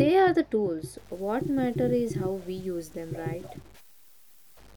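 Speech with low bit depth without dither from 0.98 s, after "are the tools", to the end: grainy, signal-following distortion about 30 dB down, likely 7-bit truncation, showing as stair-stepped waveform and broadband grit tracking syllables.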